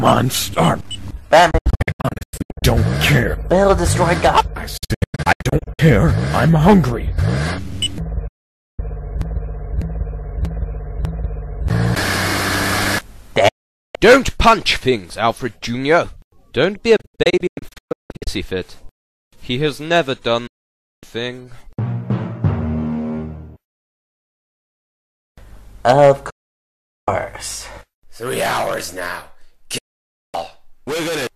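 Digital broadcast dropouts mute the sound at 1.51–2.63, 4.77–5.79, 8.27–8.79, 13.48–13.95, 16.96–18.27, 20.47–21.03, 26.30–27.08 and 29.78–30.35 s. The receiver lost valid frames and muted with an 8 ms fade. The first, second and fifth break into short holes. The sound sent during each gap is lost.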